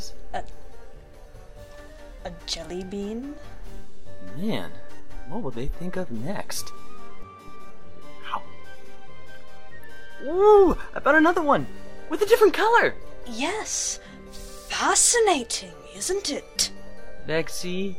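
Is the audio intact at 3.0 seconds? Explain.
Yes, the audio is intact at 3.0 seconds, with no fault at that moment.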